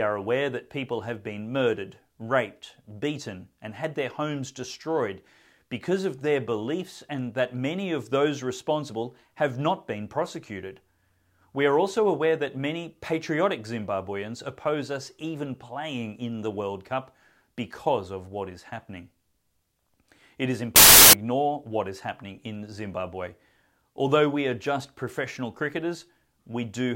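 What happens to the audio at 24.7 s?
At 24.7 s the speech continues cleanly, with no dropout, click, distortion or other fault at that point.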